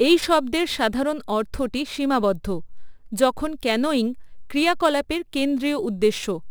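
Speech, with a crude rate conversion running through the whole clip. Samples are dropped or repeated with no filtering, which fits a 48 kHz to 44.1 kHz change. The repeating error adds an inharmonic, gritty fizz roughly 25 dB below the speech, strongest on loud and bright sounds.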